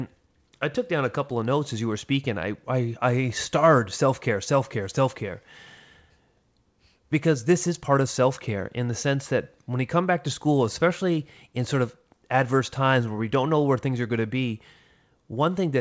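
Listening closely to the speech in this clip, nothing technically wrong stood out at any point.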